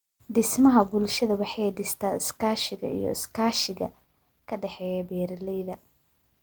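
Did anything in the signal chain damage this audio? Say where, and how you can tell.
Yes. A digital gain stage most likely switched its setting without a ramp. At 4.04 s the speech and background noise drop together by about 6 dB in a single step, a sudden gain jump that holds to the end.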